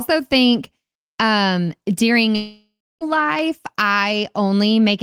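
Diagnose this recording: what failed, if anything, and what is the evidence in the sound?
At 2.35 s the speech breaks off. The last sound stretches into a buzzing tail that fades, and silence holds for about the final 300 ms before the speech resumes at 3.04 s. Roughly 0.66 s of material never returns. This is a long network dropout at the network stage. Packets likely stopped arriving, and the receiver's concealment repeated and faded the last sound, then gave up and left silence until the stream resumed.

At 3.39 s there is one sharp click, a thin vertical line across the spectrum, with no audible gap around it. This is dropped samples: a fraction of a millisecond is missing, so the waveform jumps straight from one value to a later one. The short loss points to the driver or buffer stage, which likely skipped a handful of samples during transfer.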